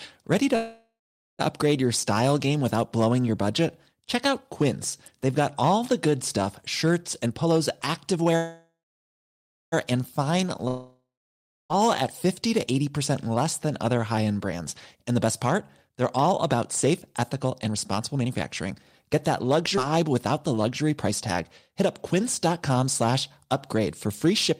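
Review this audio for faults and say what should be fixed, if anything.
Throughout the speech, loud peaks carry a crackle. This is hard clipping: the signal was driven about 4 dB beyond what one stage could pass, so under one percent of samples had their tops cut flat. Those flat tops add harmonics high in the spectrum, and that is the crackle on the loudest moments. Reduce gain before the converter or stage that overloads, so peaks stay within its range.

From 0.55 to 1.41 s, just before "upgrade your", the sound stretches on as a fading buzz and then goes silent for about 0.46 s. From 8.36 to 9.74 s the same thing happens, with about 0.96 s of silence. In both cases the audio then continues from where it stopped and nothing is lost. These are call audio freezes, likely caused by delayed packets that emptied the jitter buffer, so the receiver filled the wait with 0.84 s and 1.36 s of made-up sound. 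Use a larger or adaptive jitter buffer and a more stable network path so packets arrive on time.

After "the good stuff shirts", from 7.26 to 10.19 s, the speech sounds hurried at 110% speed with unchanged pitch. After "than other high end", from 14.45 s to 24.52 s, it runs hurried at 107%. This is jitter buffer speed-up. The buffer held more audio than its target, so the receiver cut out short pitch-period pieces many times in a row, about 0.3 s in the first stretch and about 0.7 s in the second. Smoother packet delivery keeps the buffer near its target, so it never has to catch up this way.

From 10.68 to 11.72 s the sound decays into silence for about 0.63 s. It then resumes further on, and about a second of speech is gone. This is a long network dropout, likely a stretch during which no packets arrived at all. The receiver extended the last sound while it waited, and the lost audio was never played. 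Add redundancy or forward error correction and fix the link that drops out.

At 19.76 to 19.79 s, playback jumps forward almost seamlessly, and about a fifth of a second of speech is missing. This is a skip ahead: a short stretch was discarded while later audio was already waiting, and the two sides were joined with only a few milliseconds of fill. Keep the jitter buffer from overflowing so that queued audio is not thrown away.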